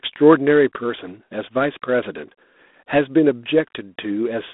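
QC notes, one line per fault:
throughout: G.726 ADPCM coding. The speech carries a harsh, rasping hiss that rises and falls with its level, which fits the 24 kbit/s mode. At that rate each sample is coded as only 3 bits of difference from an adaptive prediction, so quantisation noise sits well above what the 32 kbit/s mode would give. The band runs from roughly 200 Hz to 3.6 kHz, with nothing above 3.8 kHz, giving a narrow, telephone-like sound.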